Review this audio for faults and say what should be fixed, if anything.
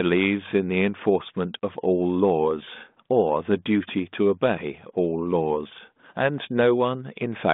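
Nothing stood out on listening, so there is nothing here that needs fixing.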